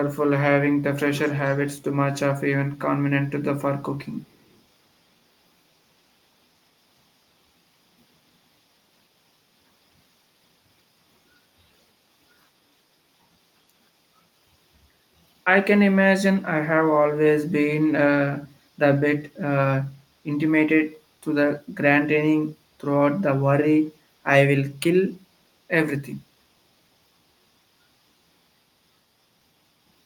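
From 1.16 to 1.69 s, and faintly again at 4.27 to 4.6 s, a delayed copy trails the speech by 251 ms, about 15 dB down and then barely audible: echo leak, likely a far-end canceller letting loudspeaker pickup through. A distinct repeat, not a smeared reverb tail.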